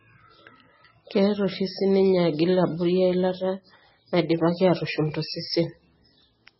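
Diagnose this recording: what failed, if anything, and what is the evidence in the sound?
The speech sounds watery and swirly from start to finish, with a dull top end. Nothing survives above 5.6 kHz, so s sounds lose their hiss and take on a metallic edge. The stage is the codec, and the likely cause is heavy MP3 compression at a bitrate under 20 kbps. Starved of bits, the encoder cuts the treble at a fixed frequency and zeroes quiet frequency lines, which flicker between frames and produce the swirl.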